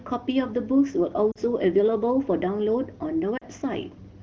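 At 1.32 s and again at 3.37 s, lost AMR speech frames cause brief dips toward near silence of about 70 ms. Each gap fits two missing 20 ms frames. The decoder repeats the last pitch with falling gain, seen as smeared, fading harmonics and a shrinking waveform envelope.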